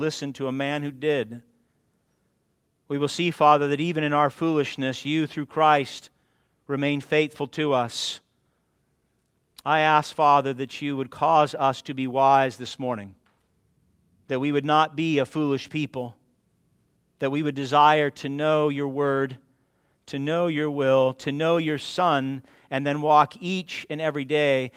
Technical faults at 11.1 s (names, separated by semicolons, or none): none